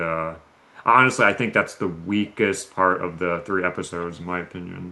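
A far-end echo canceller, likely, let through part of the loudspeaker signal its microphone picked up, causing echo leak at 0.4–0.75, 1.96–2.04, 2.24–2.35 and 4.83–4.92 s: faint scraps of the speech returning about 457 ms late, about 10 dB louder at 2.24 s.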